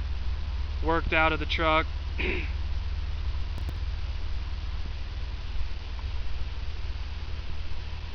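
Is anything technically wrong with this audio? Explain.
Yes. From 3.58 to 3.76 s there is processor overload crackle. The processor repeatedly missed its deadlines for buffers of around 5 ms, and about five of them were skipped outright. The result is a gritty, tearing burst of short hard-edged gaps, not a single clean dropout.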